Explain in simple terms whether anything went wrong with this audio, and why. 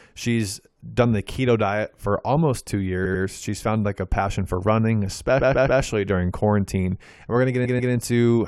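The speech stutters three times, as if the recording briefly skips back. Just after "diet for almost two", near 3.04 to 3.23 s, a snippet of about 93 ms plays twice more. Between "a passion for running" and "during quarantine", from 5.39 to 5.81 s, a 139 ms piece repeats three extra times. At 7.64 to 7.92 s, another 139 ms piece repeats twice. This is repeated frames: short chunks of the compressed audio were stored or sent more than once, so the player played them again, adding a fraction of a second each time.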